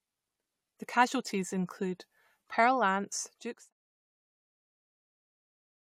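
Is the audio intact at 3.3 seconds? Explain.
Yes, the audio is intact at 3.3 seconds: the level there is simply easing down as part of a smooth fade-out, a deliberate editorial taper with no click, gap or hard edge.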